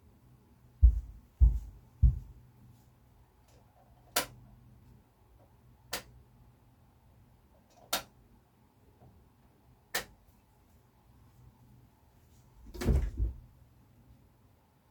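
No technical faults are audible.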